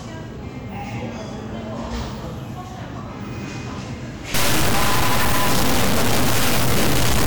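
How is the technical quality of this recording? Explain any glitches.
A stuck bit spoils the last part. From 4.34 s to the end, harsh buzzy distortion appears, likely from one high data bit held fixed, offsetting samples by a large step. The waveform shows hard jumps; the spectrogram fills with broadband noise, even in pauses.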